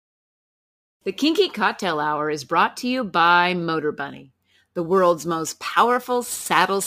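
From 4.10 s to the end of the clip, the speech picks up a gritty, inharmonic fizz riding on the louder and brighter syllables. This is crude rate conversion: samples were simply dropped or repeated with no filtering, in a pattern that points to a 48 kHz to 44.1 kHz change. The error sits roughly 25 dB below the speech. A spectrogram shows faint spurious tones scattered between and above the harmonics, and a zoomed waveform shows small steps.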